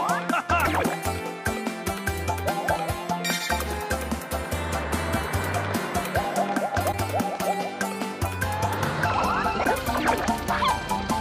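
At 0.64 to 0.67 s, 6.91 to 6.94 s and 9.63 to 9.66 s the audio jumps ahead, and each jump is followed by about 30 ms of chirp, noise burst or brief gap. That length matches one MP3 frame of about 26 ms, which points to a likely broken MP3 bit reservoir: frames went missing, so the next frame drew its borrowed data from the wrong bytes. Unlike a plain dropout or click, the sound skips forward and the frame right after it is garbled.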